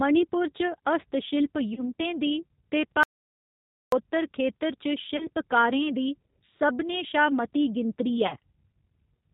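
The whole clip passes through the G.729 codec at 8 kbit/s. The speech is rebuilt from a vocal tract filter, a pitch predictor and a few pulses per frame, and nothing above 4 kHz survives. The voice sounds band-limited, rough and synthetic throughout.

From 1.74 to 1.84 s, VoIP packet loss concealed by the speech codec takes out about 30 ms of audio, a gap that fits a single lost packet. The decoder extrapolates from its last pitch and filter state, lowering the gain as it goes. The voice smears into a brief buzzy tone or coloured noise that fades, and stays weak or distorted as it recovers.

From 3.03 to 3.92 s there is an audio dropout to silence. The input was likely lost, and the recording went on writing silence. The speech cuts off abruptly into about 0.89 s of silence with no room tone, then resumes mid-flow.

The same concealed packet loss returns from 5.17 to 5.27 s and from 8.27 to 8.36 s. 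Each time, about 30 ms is replaced by a decaying extrapolation, followed by a short stretch of weakened or distorted speech.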